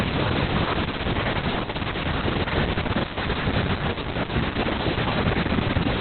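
From start to finish the speech sounds muffled, hoarse and faintly robotic, with nothing above about 4.3 kHz, so sibilants are dull and the whole clip has a telephone-like narrowness. This is Opus voice compression running in its SILK linear-prediction mode at narrowband. The band is cut that low and the excitation is coded so coarsely that the damage is heavy, which fits a bitrate of around 6 kbps with long 60 ms frames.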